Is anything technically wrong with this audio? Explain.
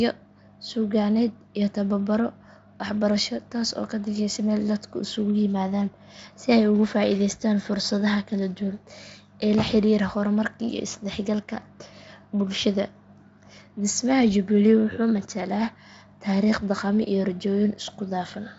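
No, nothing is technically wrong.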